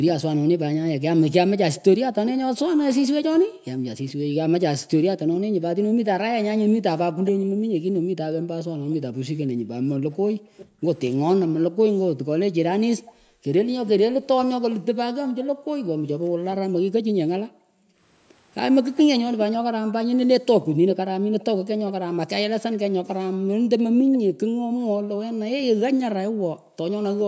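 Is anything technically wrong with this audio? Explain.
Yes, there are two problems, both tied to the far end of a call running on a loudspeaker.

Echo leak: a faint delayed copy of the speech trails the talker by about 403 ms, from 1.75 to 4.13 s, 7.25 to 15.33 s and 18.96 to 24.18 s. It sits around 15 dB down in the first stretch and nearer 20 dB down later. The likely cause is an echo canceller on the loudspeaker side that didn't fully subtract what its mic picked up, so the leftover got sent back as a delayed copy of the speech.

Background gated by the echo canceller: between 3.44 and 26.77 s the room tone keeps ducking out and coming back, dropping by as much as about 40 dB and adding up to roughly 5 seconds of dips. The canceller was clamping the mic whenever its speaker was active, so the background pumps in and out. The band-limit at 8 kHz is just the call's normal mic processing.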